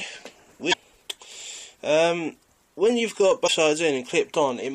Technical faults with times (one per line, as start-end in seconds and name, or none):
0.69-0.75 damaged data in a compressed stream
3.44-3.49 damaged data in a compressed stream